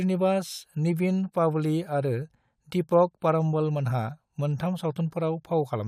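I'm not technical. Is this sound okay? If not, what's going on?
Yes, nothing in this recording points to a technical problem with the audio signal.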